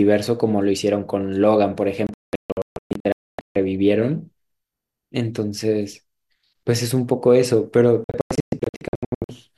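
A speech clip in which the sound twice breaks into a scatter of short muted holes, from 2.07 to 3.56 s and again from 8.04 to 9.30 s. About 1.15 s of audio goes missing in the first stretch, with the longest gap 264 ms, and about 0.77 s in the second, with the longest gap 120 ms. This is a digital broadcast dropout: the receiver silenced frames that arrived corrupted or not at all, so that speech is gone rather than delayed.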